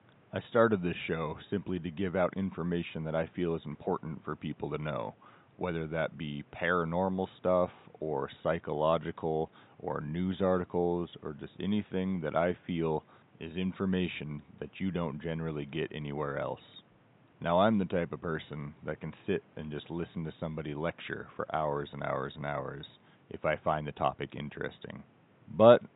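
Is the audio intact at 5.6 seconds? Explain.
Yes, the speech at 5.6 s is intact, with only the faint room noise, about 31 dB below the speech, audible behind it.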